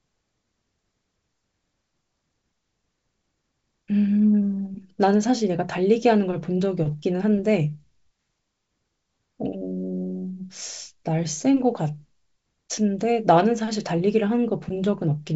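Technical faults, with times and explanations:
Nothing here counts as a fault: the speech comes over a G.722 wideband telephone link at 64 kbit/s, so the band simply stops at about 7.7 kHz, as that coding is built to do.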